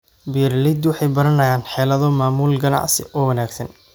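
No audible technical faults.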